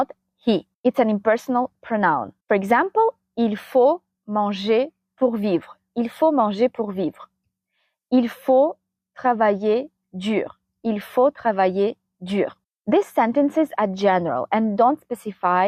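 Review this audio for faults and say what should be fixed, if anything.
No faults; nothing needs fixing.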